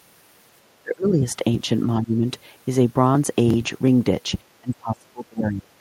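Speech that drops away three times: from 0.82 to 1.24 s it sinks by around 25 dB, from 2.02 to 2.26 s by around 10 dB, and from 4.61 s to the end by around 30 dB. These show as sudden waveform notches and faded spectrogram bands, likely speech suppressed in double talk by an echo canceller.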